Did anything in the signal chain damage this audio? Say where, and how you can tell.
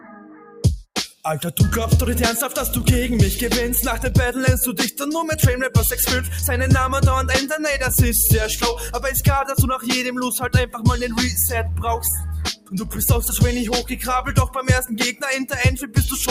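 Yes. Throughout the clip the level breathes and pumps: held and sustained parts sink while onsets stay up, giving a fluttery, thinned texture with the gain swinging by around 5 dB. That is a noise suppressor applied to music or sounds, a call-processing stage built for speech. It treats steady tones and ambient tails as background noise and pulls them down, so the balance between attacks and sustain keeps shifting.

The suppressor also pulls down specific passages harder, where the sound is cut by the noise suppressor. From 0.00 to 0.64 s the opening dips by about 9 dB. At 10.66 to 10.81 s it drops by about 13 dB, and at 12.52 to 12.94 s by about 17 dB, the deepest loss. From 13.83 to 14.06 s it drops by about 6 dB. At these points the suppressor judged the sound to be noise and attenuated it beyond its normal pumping.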